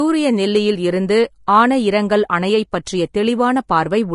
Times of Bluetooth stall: none

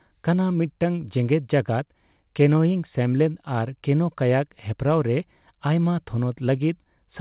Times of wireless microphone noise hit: none

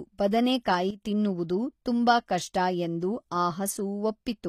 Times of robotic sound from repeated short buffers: none

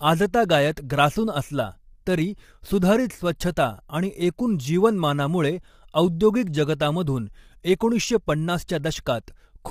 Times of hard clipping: none

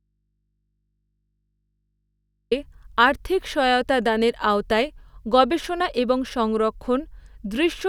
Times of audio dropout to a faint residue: 0.00-2.51

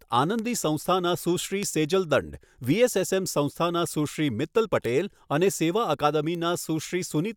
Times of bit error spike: 0.39, 1.63, 2.64, 4.85, 6.35

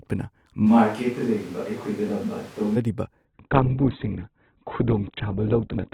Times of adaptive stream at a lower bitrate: 3.25-5.94

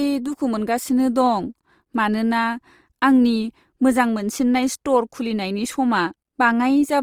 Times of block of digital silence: none

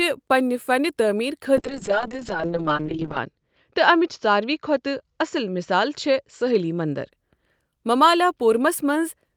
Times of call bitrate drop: 1.56-7.17

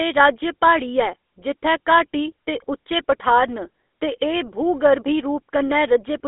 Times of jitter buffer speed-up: none

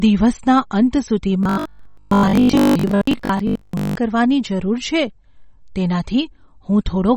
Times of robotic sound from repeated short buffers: 1.43-3.95

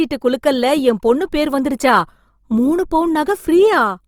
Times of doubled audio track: none

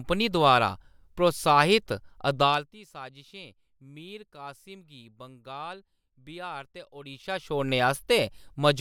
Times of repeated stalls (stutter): none

